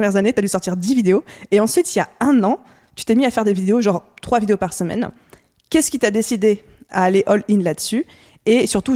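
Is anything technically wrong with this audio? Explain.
No, nothing stood out as technically wrong when listening to this speech clip.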